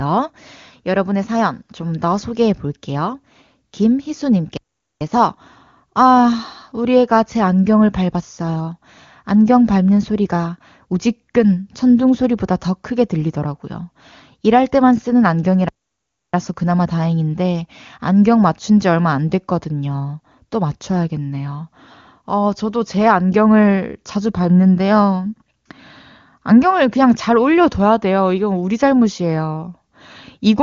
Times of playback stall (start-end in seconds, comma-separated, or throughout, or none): 4.57-5.01, 15.69-16.34